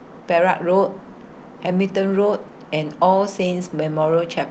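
Nothing stood out on listening to this speech, which carries the expected ceiling of about 8 kHz from the call's microphone processing and Opus codec.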